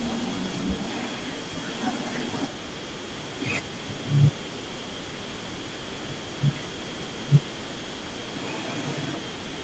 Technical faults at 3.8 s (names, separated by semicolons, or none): echo leak